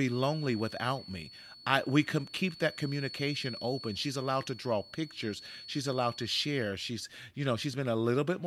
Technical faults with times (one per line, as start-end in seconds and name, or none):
0.00-6.78 feedback whistle